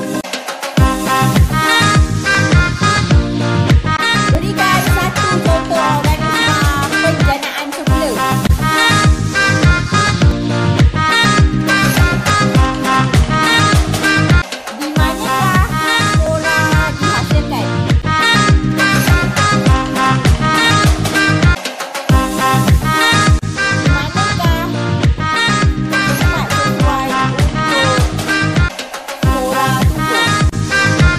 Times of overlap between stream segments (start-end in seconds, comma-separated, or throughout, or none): 2.35, 4.35, 8.32, 10.31, 12.30, 16.26